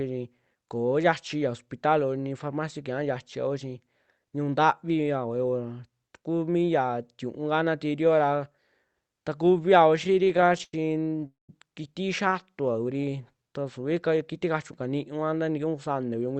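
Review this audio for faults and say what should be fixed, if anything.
Repeated stalls (stutter) came from packets arriving late or too slowly, so the jitter buffer kept draining between 9.96 and 11.23 s. Each time, the receiver stretched the last sound to bridge the wait: 18 gaps in that stretch, 270 ms of filled audio in total, the longest 88 ms, about a fifth of the span concealed. Nothing is lost, but the speech drags and stutters in short hitches, with the longer fills fading before the audio resumes.

A call audio freeze follows from 11.27 to 11.50 s, likely because packets were held up in transit and the buffer emptied completely. The last sound is carried on and fades, then 160 ms of silence sits inside a 221 ms filled gap before the speech picks up exactly where it stopped. No audio is missing, but the playback now runs 221 ms later than before.

A jitter buffer slow-down runs from 12.53 to 13.44 s, where the buffer was running low and rebuilding its reserve. 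The receiver repeated single pitch periods and bits of pauses, adding 144 ms, so the speech plays at 85% speed with its pitch unchanged. Sounds are drawn out and the delivery turns sluggish.

A jitter buffer speed-up appears from 15.42 to 16.36 s, after the buffer had filled beyond its target, as happens when delayed packets land together. To shed the surplus, the receiver trimmed short pitch-period pieces, about a tenth of a second in all. The speech runs at 110% speed at the same pitch and sounds hurried.

Stabilising the network path to cut late and bunched packet delivery, for instance with prioritised traffic for the call, would remove the cause of all four faults.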